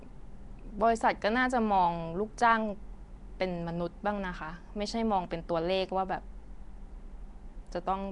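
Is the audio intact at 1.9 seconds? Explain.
No. At 1.9 seconds the speech, like the whole clip, has a rough, hissy halo and a smeared, underwater quality, with nothing above about 10.6 kHz. This is likely Nellymoser compression, at a rate that fits roughly 44 kbps. The codec spends a fixed two bits per sample on short blocks and fills starved bands with noise. That substituted hiss is what sets it apart from a plain low-pass filter, which only dulls the top.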